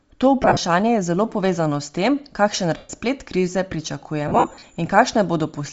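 Throughout, the speech has a breathy, grainy edge and a thin top end. This is plainly audible Bluetooth LC3 compression. It likely runs near 32 kbps with 7.5 ms frames. The codec zeroes upper bands and fills them with noise.

Lost LE Audio frames come next. From 0.43 to 0.59 s, before "je zelo povezano s", short dropouts scatter, the longest about 40 ms. At 2.77 to 2.90 s, after "povezano s tem kakšen", one gap follows. From 4.28 to 4.64 s, gaps scatter, the longest about 50 ms. Each smears into noise and fades.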